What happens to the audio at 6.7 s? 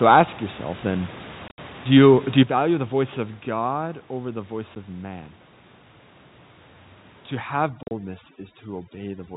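Nothing goes wrong at 6.7 s: the speech carries on intact through that moment, with no dropout, glitch or other fault.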